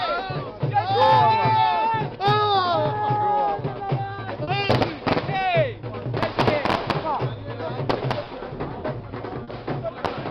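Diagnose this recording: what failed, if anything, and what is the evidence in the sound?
Network stage: short concealed packet loss at 4.43, 8.23 and 9.43 s. The receiver extrapolated the preceding sound across 40, 20 and 40 ms, leaving brief smears rather than silent dropouts.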